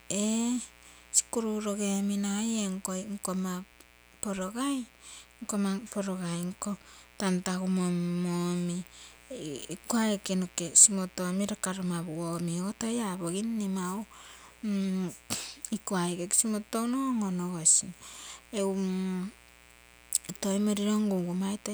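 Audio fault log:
throughout mains buzz. A steady, raspy buzz sits well below the speech. Sharp spikes repeat twice per 60 Hz cycle, spreading harmonics into the kilohertz range.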